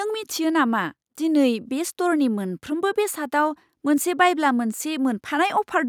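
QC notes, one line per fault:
No faults heard.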